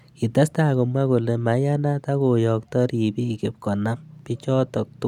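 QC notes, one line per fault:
No faults heard in this speech recording.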